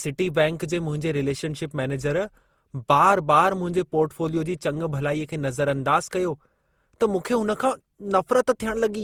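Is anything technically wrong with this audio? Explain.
Yes. Generation loss runs through the whole speech clip. It sounds swirly, smeared and hollow, with blurred attacks. The likely cause is around ten rounds of lossy encoding, which fits Opus at 64 kbit/s. Each pass requantises on a shifted frame grid, stacking noise.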